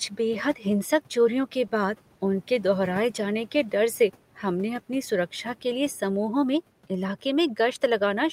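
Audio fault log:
1.67–1.71 s, short stall from a late packet: the sound is held about 20 ms while the jitter buffer waits, then resumes where it stopped, with nothing skipped, unlike a lost packet.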